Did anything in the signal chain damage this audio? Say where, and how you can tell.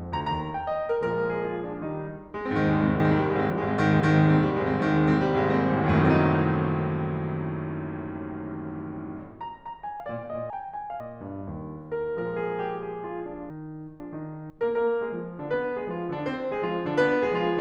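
Yes: the music jumbles at 3.0–4.0, 10.0–11.0 and 13.5–14.5 s, chunks out of order, where a buffering stage played a 500 ms block one block late.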